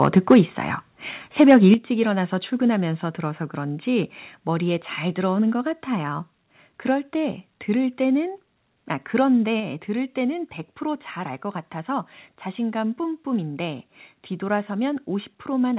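The speech opens with microphone overload from 0.02 to 0.4 s. The loudest syllables crackle and sound harsh. Their peaks are flattened, with the input pushed about 4 dB past the converter's limit and a few percent of samples clipped. The likely cause is input gain set too high for the converter. At 0.34 s, while that overload is still going, the level drops by about 2 dB. This is a microphone volume step-down. Voice and background fall together, in one step. The likely cause is the call software lowering the device gain after it detected clipping.

Overload returns from 1.4 to 1.72 s, with the same flattened, crackling peaks at about 4 dB over. Right after it, at 1.74 s, the level drops by about 7 dB. This is the largest step in the clip.

Smaller step-downs follow: about 1 dB at 2.76 s, about 1 dB at 5.52 s, and about 3 dB at 9.6 s. Each is a sudden, permanent drop in loudness rather than a fade. 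Throughout, nothing is heard above 4 kHz, which fits a narrowband call codec.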